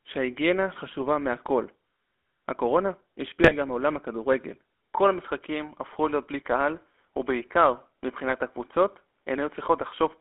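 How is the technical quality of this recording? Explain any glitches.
The recording has audible technical degradation throughout, with two short corruption bursts and a change in character partway through.

GSM full-rate codec: From start to finish the speech carries the buzzy, gravelly roughness of this codec, confined to roughly 250 Hz to 3.5 kHz, which fits a 13 kbps full-rate link. The codec rebuilds the voice from a vocal-tract filter driven by sparse, regularly spaced pulses, so fine detail is lost and replaced by that coarse texture.

GSM bit errors: Two bursts, at 3.41 to 3.55 s and at 8.29 to 8.33 s, break into squawks and gargling pops. Corrupted bits reached the decoder, distorting the filter, pitch or gain parameters for a few frames, which bends the spectrum and throws the level around briefly.

Input switched to a poorer device: From 4.92 s to the end the sound turns duller and boxier, with nothing above 3.8 kHz and a faint new noise floor far below the speech. 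There is no gap, and the level stays about the same. The likely cause is the input moving to a narrower-band microphone or headset profile.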